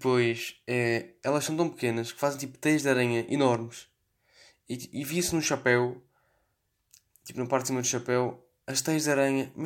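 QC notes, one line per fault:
No fault found.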